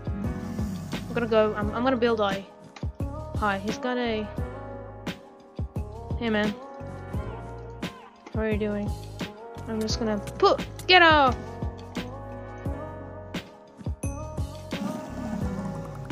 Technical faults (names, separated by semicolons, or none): none